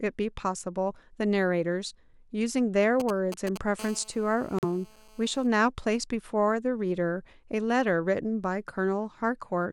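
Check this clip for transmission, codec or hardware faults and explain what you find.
Three faults turn up in this speech clip: radio interference from a nearby 2G phone in two phases, and a short dropout where the decoder discarded damaged data.

GSM signalling bursts, 3.0 to 3.58 s: a nearby 2G handset exchanging brief control transmissions with the network had its radio pulses rectified by the audio circuitry. The result is a galloping dit-dit-dit of ticks and short 217 Hz buzzes, sitting loud, roughly 10 dB below the speech.

GSM phone buzz, 3.79 to 5.47 s: the same handset moves into a call and transmits continuously in 217 Hz bursts, which the circuitry again demodulates. This produces a steady, raspy 217 Hz buzz rich in harmonics, unrelated to the speech, at about 23 dB below it.

Corrupt frame muted, 4.59 to 4.64 s: flipped bits in the compressed stream made the decoder reject data, and the player substituted silence. 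Inside the buzz there is an abrupt 56 ms hole, which fits two lost frames, with timing preserved around it.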